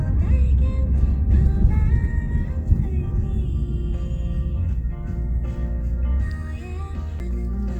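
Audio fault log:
0.9 to 5.65 s, call bitrate drop: the call's bandwidth estimate collapsed and the encoder was pushed from roughly 64 kbps down toward 15 kbps, judging by the sound. Coarser coding strips the highs, so the sound turns muffled and rough, worst for about 1.9 s before recovering.
7.19 s, CD skip: the laser jumped to a different turn of the disc's spiral, so the player muted for a brief moment, around 10 ms, then resumed elsewhere. This is heard as a tick followed by an abrupt jump in the sound's continuity.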